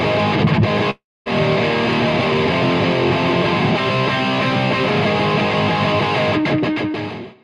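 At 0.90 s the audio cuts to a fading buzzy continuation that sinks to near silence for about 250 ms, resuming at 1.28 s with 360 ms lost, likely a long network dropout. A spectrogram shows smeared, decaying bands then an empty gap; the waveform tapers to a flat line.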